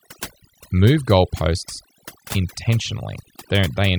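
From start to finish, the speech carries overdone noise removal. A noise reducer set far too aggressively attenuates or mutes individual frequency bands whenever their level sits close to its noise estimate, and low-level parts of the voice fall below that threshold along with the noise. The gaps between phrases drop to near silence dotted with twinkling, chirpy specks, and the voice itself is stripped of its quieter detail.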